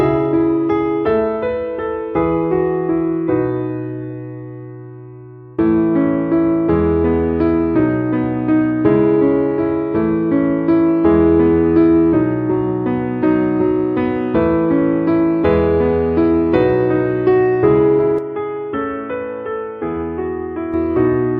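From 18.18 to 20.74 s the sound turns boxy, cut off above 3.5 kHz and slightly quieter, likely an input switched to a poorer device.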